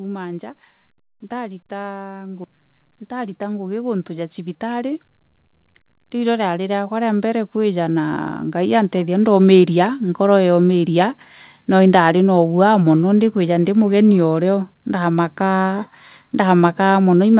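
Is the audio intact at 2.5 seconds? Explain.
No. At 2.5 seconds the speech and the background noise swell together, climbing about 15 dB from 1.28 s to 10.01 s, just before "nkoro yaumiria". This is automatic gain rising: the gain control judged the input too quiet and raised its gain slowly.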